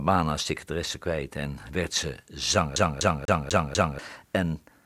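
A speech clip that locks into a fast, even stutter from 2.76 to 3.99 s, where the same 246 ms slice plays five times over, each jump marked by a brief mute. This is a CD stuck on one turn: a scratch knocks the laser back one track at the same point on each rotation.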